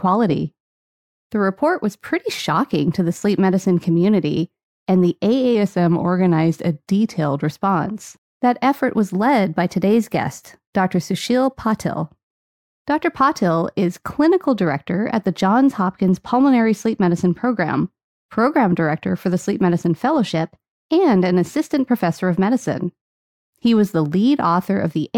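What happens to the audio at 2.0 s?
Nothing goes wrong at 2.0 s; the speech plays through that moment intact, with no dropout, click, distortion or other fault.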